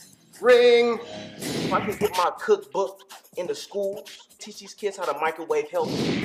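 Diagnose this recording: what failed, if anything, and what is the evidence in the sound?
Nothing in the recording points to a failure at any stage, from the wiring and converter through to storage and playback, so there's no fault to diagnose here.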